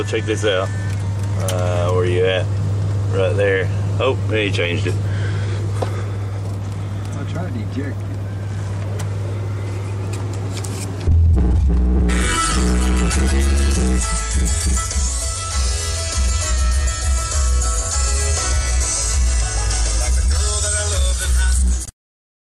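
A gap at a join of encoded pieces opens at 21.85–21.88 s: a gap of about 23 ms where separately encoded segments were spliced without trimming encoder delay and padding.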